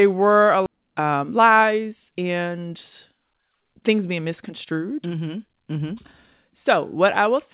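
At 0.66 to 0.68 s, right after "were a", the sound makes a skip ahead. About a second of audio never plays: it was discarded while later audio sat waiting, and the two sides are butted together with no silence in between. A dropout would leave a gap or a fill. Here the line simply lurches forward mid-phrase, with a hard join.

Jitter buffer speed-up follows from 0.76 to 2.67 s, at about 110 percent, and again from 3.10 to 4.72 s, at about 108 percent. The receiver was holding too much audio, so it trimmed tiny pitch-period slices over and over, removing roughly a fifth of a second in the first stretch and a bit less in the second. The pitch holds steady, so it isn't a pitch shift. The sound just feels rushed, unlike the single abrupt jump of a skip. Throughout, the band stops at 4 kHz, which fits G.711 A-law at 64 kbps on the call path.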